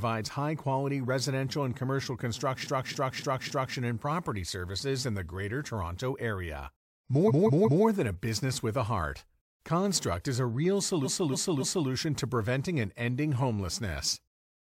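Repeated frames stutter the speech three times. A 0.28 s chunk replays four extra times from 2.63 to 3.74 s, a 0.19 s chunk replays three times from 7.27 to 7.83 s, and a 0.28 s chunk replays three times from 11.03 to 11.87 s. Each time, the same compressed frames got decoded again, adding dead-ringer repeats.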